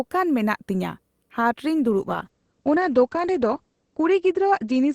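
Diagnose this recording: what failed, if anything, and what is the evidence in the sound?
A call bitrate drop, at the codec stage driven by network bandwidth estimation, begins at 1.91 s and lasts to the end of the clip. The encoder rate falls from 48 to 11 kbps, bottoming out for about 2.1 s. The speech turns coarse and muffled because Opus codes more coarsely and narrows its coded band from 20 kHz to 8 kHz. On a spectrogram, everything above 8 kHz vanishes during the drop, leaving a hard, flat ceiling.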